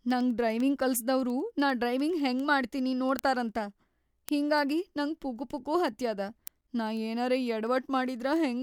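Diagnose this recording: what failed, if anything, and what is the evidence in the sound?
The digital link feeding the recorder was not clock-locked: the receiving device ran on its own word clock, drifting against the sender's by roughly 200 parts per million. Every time the two clocks slipped past each other, a single sample was dropped or repeated. In this speech recording the result is word clock ticks, sharp clicks of uneven strength at a steady rate of about ten per second from 0.11 s to 8.56 s, around a hundred in all.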